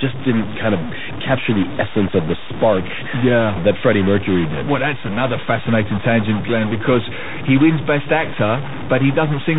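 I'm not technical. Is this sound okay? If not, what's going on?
No. A stuck bit, throughout: distortion sits on the speech and the pauses fill with noise, likely because one digital data line is stuck at a fixed value.

Bluetooth CVSD headset codec, throughout: the speech went through a phone-style headset link that cuts everything above 4 kHz, so it sounds muffled, s sounds turn scratchy, and a grainy hiss runs underneath.

Bit errors on a Bluetooth voice link, at 1.29 to 1.39 s, just before "the essence of the", and at 6.84 to 6.96 s, just before "he wins": scrambled data on the wireless link adds brief bursts of rushing, crackly noise, without loud clicks.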